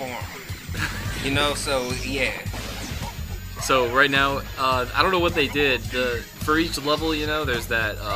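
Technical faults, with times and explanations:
Throughout: switching supply whistle. A thin high tone sits near 7 kHz, spanning 6.8 to 7.2 kHz, roughly 25 dB below the sound. A switch-mode power supply is cycling at an audible rate.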